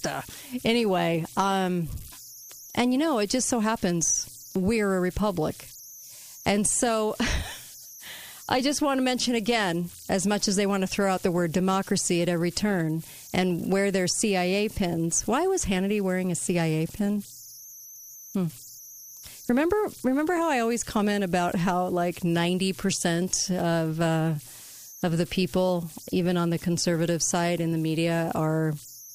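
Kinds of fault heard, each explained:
Converter idle tones: the delta-sigma converter here runs without dither, so whenever the input gets small it slips into a repeating bit pattern, and that pattern comes out as a tone. In this speech clip you get a whistle up around 7 kHz that sits in the pauses and roughens the quiet stretches into a grainy hiss. It's there the whole way through, at about 23 dB below the signal.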